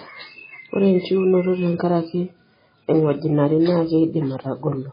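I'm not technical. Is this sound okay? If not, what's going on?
No. The recording was likely squeezed hard by MP3 compression, which discards detail to save space. Throughout, the speech has nothing above about 5 kHz, so it sounds dull and muffled, with a watery, swirly quality and smeared attacks.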